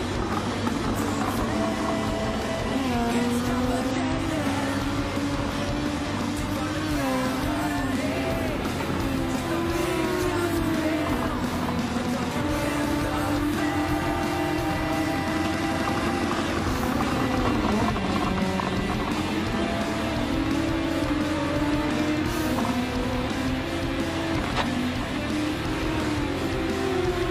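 Two spots where compressed frames get skipped, so the audio lurches forward a little. The first lands around 3.86 to 3.96 s and drops something like 50 ms; the second, at about 24.48 to 24.67 s, loses roughly 100 ms. Whole frames never made it to playback, either missing or rejected by the decoder as corrupt.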